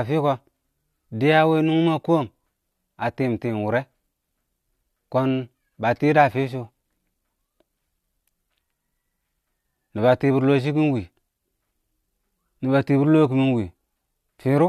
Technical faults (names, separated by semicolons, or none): none